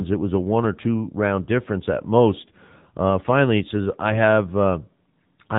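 The speech runs through the AMR narrowband mobile codec for its whole length, coded at a low rate that fits the 7.95 kbps mode. Nothing passes above about 3.8 kHz, so the voice is dull and boxy, and the sparse pulse-driven synthesis gives it a plainly audible buzzy, synthetic edge.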